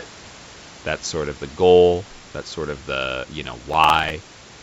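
A speech recording carried over a call link whose audio stops at 8 kHz. Right after "of the you know", from 3.70 to 4.10 s, a gritty processor overload crackle tears through the sound. The processor missed around ten very short buffer deadlines in a row. Each miss replayed a scrap of old audio with hard edges.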